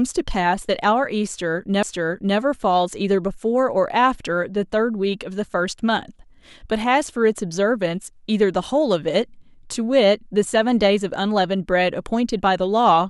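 Speech with a CD skip at 1.83 s: a brief mute of a few milliseconds ends in a tick, then playback resumes elsewhere, shown as a waveform gap and a vertical spectrogram line.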